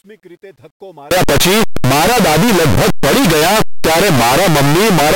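Signed and unsigned mixed up, from 1.11 s to the end at 5.16 s: the speech turns into very loud, harsh distortion, and quiet stretches come out as loud as the rest. The likely cause is 8-bit samples read with the wrong sign convention, flipping the top bit so that every zero crossing jumps across the full range.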